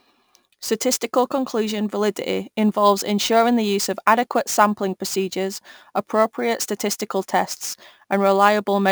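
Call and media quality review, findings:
Imaging from sample-and-hold upsampling, whole clip: metallic fizz tracking speech; spectrogram shows a mirrored band at 12 to 24 kHz, about 20 dB down. Sample-repeat upsampler, 24 kHz to 44.1 kHz, with no smoothing filter.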